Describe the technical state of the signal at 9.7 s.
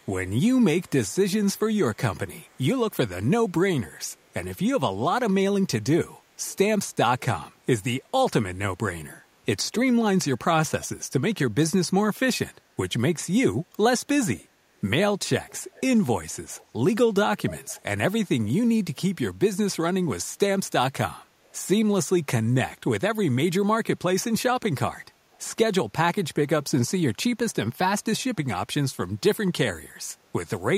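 At 9.72 to 9.79 s an echo leak briefly surfaces: a faint, delayed copy of the speech, trailing the original by 258 ms and sitting roughly 15 dB below it. It lasts only about 70 ms, a short scrap. The likely cause is a far-end loudspeaker whose echo canceller let part of the returned signal through. On a spectrogram it appears as a weak, smeared repeat of earlier harmonic patterns; the waveform shows a low-amplitude ghost burst.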